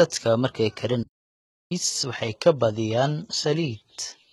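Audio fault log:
throughout HE-AAC compression: likely HE-AAC coding, with nothing above about 11.8 kHz; heavy codec damage, rebuilt treble leaves sibilants gritty and metallic, which fits a very low bitrate near 16 kbps.
1.02–1.72 s playback stall: speech cuts off for about 0.68 s, then resumes; likely the player starved of data or blocked, muting output until recovery.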